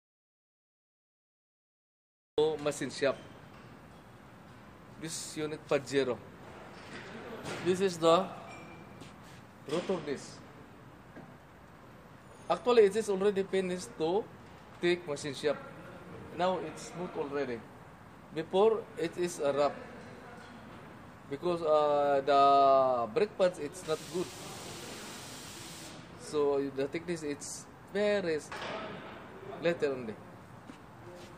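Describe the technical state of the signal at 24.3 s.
At 24.3 s the signal is intact, with no dropout, distortion, glitch or other technical fault present at that point.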